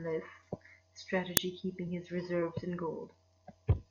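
At 1.37 s the speech is cut by an uninitialised buffer: one block was sent to the output before any audio had been written into it, so whatever stale values sat in that memory were played as samples. It is a loud crack lasting about 5.3 ms, which fits a 256-sample buffer. Unlike a dropout, which leaves silence, or a single click, the crack is loud and noisy across its whole block.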